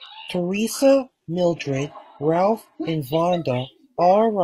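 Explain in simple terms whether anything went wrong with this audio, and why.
An adaptive stream starting at a low bitrate affects the first 2.94 seconds. The player began with a heavily squeezed, low-quality version of the stream so the audio could start right away, and switched to a much better version once it had measured the connection. Until then the speech sounds dull and artificial, with fake-sounding treble and some swirly compression artefacts. At 2.94 s the sound suddenly becomes clearer, without any gap.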